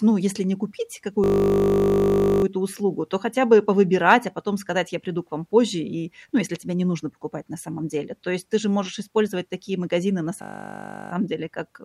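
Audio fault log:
1.24–2.44 s and 10.42–11.12 s: system hang loop. A 20 ms slice of speech repeats exactly, 60 times, then 35 times. The driver stalled while the hardware kept replaying its ring buffer. Such a short loop sounds like a steady 50 Hz buzz. No speech appears lost.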